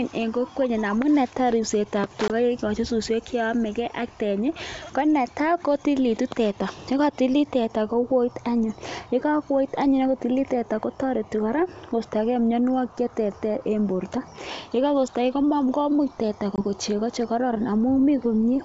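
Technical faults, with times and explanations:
2.28–2.32 s and 16.56–16.61 s (just after "komuch teta"), packet loss on an ADPCM call: each is a hard-edged silent gap of about 20 ms, roughly one packet. The decoder's adaptive predictor and step size fall out of step with the sender's, so the sound resumes mismatched before settling within tens of milliseconds.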